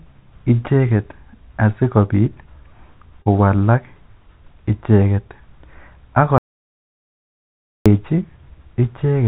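At 3.22 to 3.28 s there is a short concealed packet loss: roughly 40 ms of the speech arrived too late to decode, so the receiver extended the preceding sound to bridge the gap before rejoining the real signal. It registers as a brief smear in the speech.

From 6.38 to 7.86 s, an audio dropout to silence lasts about 1.48 s. The speech stops abruptly and resumes just as suddenly, with silence between and no room tone, likely because the input was briefly lost while recording continued. The speech from that stretch is gone. Across the clip, nothing sits above 4 kHz, which points to a G.711 A-law call path at 64 kbps.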